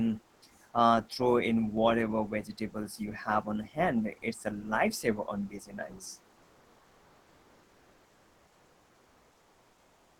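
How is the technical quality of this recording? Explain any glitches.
The recording has two faults: a brief patch of synthetic background near the start, and a regular series of clicks through most of the speech.

Comfort noise in place of the background, 0.33 to 0.41 s: for about 80 ms in a pause, the real room sound, already about 40 dB below the loudest speech, turns into a smooth, featureless hiss, about 2 dB different in level. The likely cause is Opus discontinuous transmission filling the gap. On a spectrogram the textured background becomes a uniform smear.

Clock drift buffer slips, from 1.77 s to 9.41 s: a sharp click recurs every 2.55 s, about four times in all. Likely mismatched device clocks, off by a few hundred parts per million, make the buffer drop or repeat a few dozen samples each time. A spectrogram shows thin vertical lines, and the waveform shows small discontinuities.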